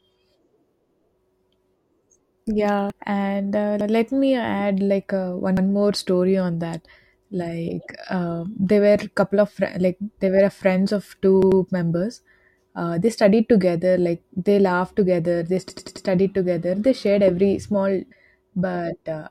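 A short glitch at 2.90 to 2.92 s, just before "and uh let me", comes from damaged data in a compressed stream: corrupted frames made the decoder lose sync and skip ahead to the next frame header. A second blip at 18.11 s has the same cause.

A stutter follows at 3.81 s, between "and uh" and "let me add like". This is a repeated buffer: audio arrived late, so the device replayed its last chunk of about 93 ms, which fits a 4096-sample buffer. The same one-repeat stutter occurs at 5.57 s, after "me add like uh" and before "more story on that". At 11.42 s the chunk plays twice more, and at 15.70 s it plays four more times, producing a rapid hard-edged judder that lasts until 16.07 s.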